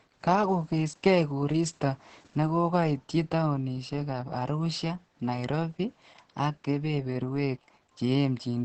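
Throughout the speech, Opus voice compression in its SILK mode leaves it muffled, hoarse and faintly robotic, which fits a bitrate near 10 kbps. A spectrogram shows a flat ceiling with nothing above 8.6 kHz, and coarse, smeared harmonics below it.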